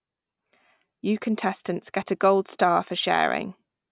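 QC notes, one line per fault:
No fault to note in this speech clip.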